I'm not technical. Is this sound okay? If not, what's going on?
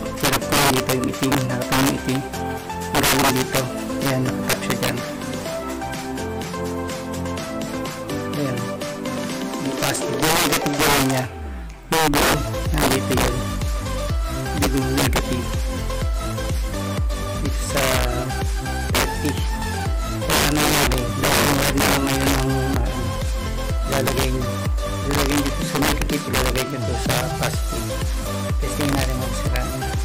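No. The audio has integer overflow throughout. When the signal gets loud, the numbers that store it run past the largest value they can hold. Instead of stopping at that ceiling, they wrap around to the opposite extreme. Each loud peak therefore snaps across the whole range at once, which you hear as harsh, violent cracks, much sharper than ordinary distortion. Only a small fraction of the audio is loud enough to trigger this, so the cracks come and go with the loudest moments.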